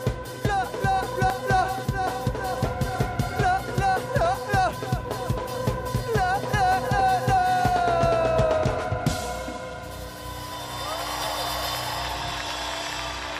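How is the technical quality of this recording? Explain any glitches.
The recording has three audible glitches, all of one kind, at 1.3 s, 5.94 s and 11.24 s. Each is likely a dropped buffer (overrun): the capture software fell behind, the hardware overwrote samples not yet collected, and the audio on either side was spliced straight together. There's no gap of silence; instead each point gives an abrupt jump forward, losing about a tenth of a second at 1.3 s and 11.24 s and about a third of a second at 5.94 s, where the skip is longest.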